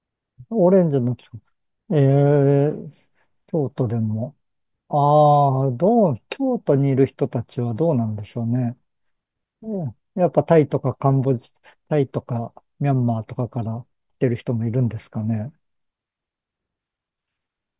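No technical faults are audible anywhere in the recording.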